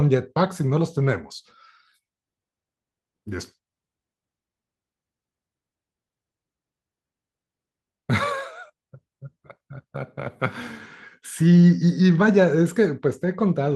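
At about 11.61 s there's a lost packet rebuilt from error correction: roughly 20 ms that sounds briefly rougher and noisier, with no actual gap. That fits a single packet going missing and the decoder playing the low-bitrate backup copy carried in the following packet.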